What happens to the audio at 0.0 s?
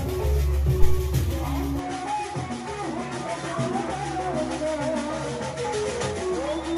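Nothing goes wrong at 0.0 s; the audio starts cleanly and is intact at that moment.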